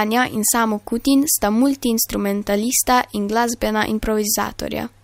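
No technical faults can be heard in the speech recording. There is nothing in the audio to mark at any point in time.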